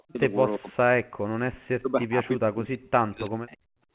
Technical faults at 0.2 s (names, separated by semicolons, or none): speech suppressed in double talk